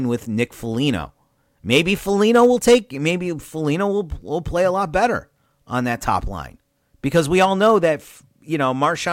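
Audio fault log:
0.00 to 4.86 s, sample clock jitter: the speech carries a fine grainy hiss, roughly 45 dB below the signal, that swells on loud and bright sounds such as sibilants and drops away in the pauses. It clears just before "better on that top". A converter clock wandering by under a microsecond samples the waveform slightly early or late, and the error scales with how steeply the waveform is changing. Unlike a steady noise floor, this hiss tracks the signal and leaves silence clean.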